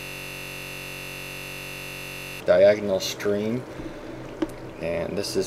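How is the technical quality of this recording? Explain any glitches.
The recording has a serious fault at the start: a system hang loop runs from the very beginning, already in progress, until 2.40 s. A single 21.33 ms slice of audio repeats exactly, over a hundred times, because the system froze while the sound hardware kept replaying its ring buffer, which fits a 1024-sample buffer. At that length it sounds like a steady buzz at about 46.9 Hz. A spectrogram shows evenly spaced horizontal harmonic lines, and the waveform shows one identical short cycle tiled end to end.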